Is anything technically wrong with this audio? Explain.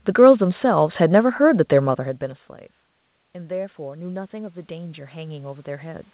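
Yes. From 3.33 s to 6.08 s, automatic gain rising: after the level at the microphone fell by about 19 dB (the talker moved back around 2 s), the gain control slowly raised its gain by about 6 dB, so voice and room noise swell together.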